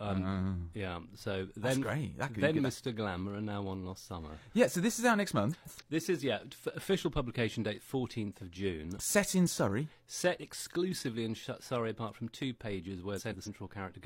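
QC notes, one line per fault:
5.52–5.82 s and 13.16–13.48 s, frames out of order: in each span, two adjacent blocks of roughly 140 ms were decoded in swapped order, which suggests runs of three frames each. The halves play exchanged, giving a garbled flutter and no lost time.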